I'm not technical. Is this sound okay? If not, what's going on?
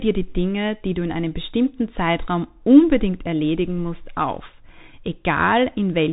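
No. The whole clip went through the Bluetooth CVSD headset codec: nothing above 4 kHz gets through, s sounds go scratchy, and a grainy hiss sits underneath.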